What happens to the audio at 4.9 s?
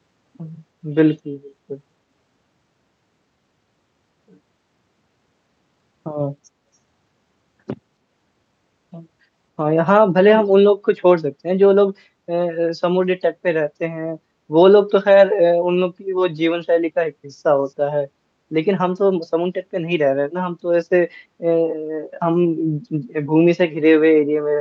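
Nothing goes wrong at 4.9 s: the speech passes through intact, carrying only the ordinary coding character of the call path.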